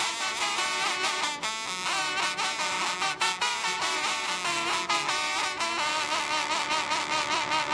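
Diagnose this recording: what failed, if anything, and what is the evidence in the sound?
Nothing failed, and the sound carries no evidence of a fault at any stage.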